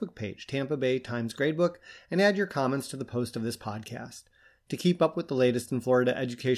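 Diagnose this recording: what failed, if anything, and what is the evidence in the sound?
Nothing failed, and there is no evidence in the sound of any fault at any stage of the recording.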